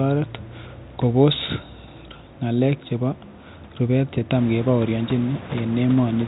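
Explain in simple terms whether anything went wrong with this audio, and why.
Nothing went wrong here; no faults can be heard.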